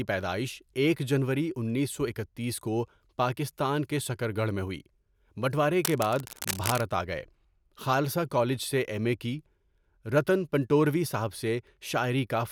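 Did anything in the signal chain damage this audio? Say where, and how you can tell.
Yes: cable scratch noise, 5.85 to 6.83 s. Ragged rustling bursts, about 10 dB below the speech, likely come from a worn analogue connection whose contact resistance fluctuates.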